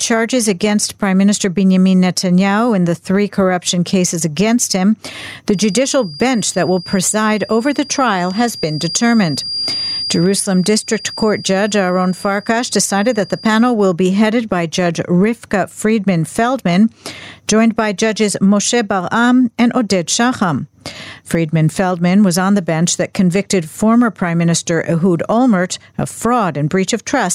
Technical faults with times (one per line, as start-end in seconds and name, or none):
0.00-27.34 gain pumping
5.47-13.74 feedback whistle